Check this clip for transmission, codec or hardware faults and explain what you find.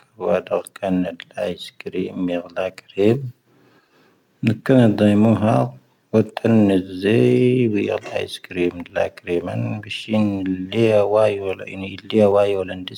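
There is one fault, overlapping chunks, at 3.89 s and 8.90 s. Each 5-second chunk begins 12 ms early, so that sliver replays, giving a brief stutter that repeats sound rather than dropping it.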